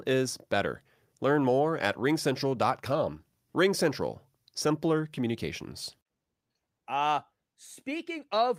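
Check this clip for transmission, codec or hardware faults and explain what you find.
Nothing turned up here: the speech runs without any transmission, codec or hardware trouble that I can hear.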